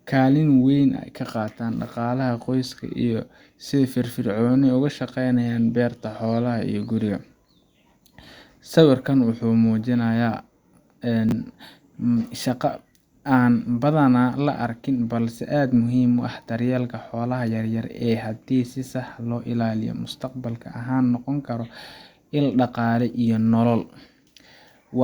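At 11.29 to 11.32 s, chunks arrive out of order. One 10 ms piece of the speech plays two chunks late. The moment sounds briefly jumbled.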